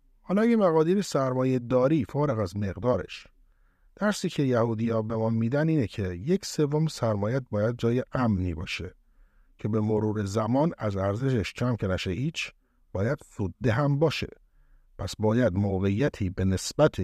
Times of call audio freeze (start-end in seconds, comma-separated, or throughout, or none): none